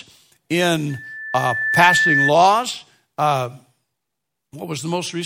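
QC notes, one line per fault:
0.89–2.33 s, loudspeaker feedback squeal: a single 1.8 kHz tone swells over roughly a second until it sits a few dB above the speech. The microphone is re-amplifying its own loudspeaker output, and at that frequency the loop gain exceeds unity until it is broken.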